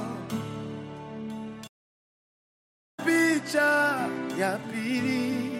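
A playback stall runs from 1.67 to 3.00 s. The audio drops to silence for about 1.3 s mid-flow, likely because the player ran short of data, then resumes.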